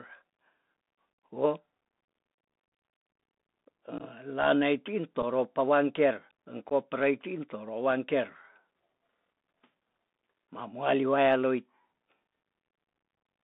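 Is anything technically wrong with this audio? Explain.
Yes, a couple of things. The whole clip is speech through a Bluetooth CVSD headset codec, which fits a 64 kbps CVSD link. The band runs roughly 200 Hz to 3.7 kHz, and the one-bit slope tracking can't keep up with fast loud changes, so s sounds get scratchy and a grainy hiss sits under the speech.

There's also unconcealed Bluetooth headset packet loss at 3.98, 5.22 and 6.69 s, the last just before "prei tin". Each gap is a hard-edged dropout of 15, 7.5 and 15 ms, which fits a couple of packets, one packet and a couple of packets lost. Nothing patches the holes, so you hear brief abrupt cuts.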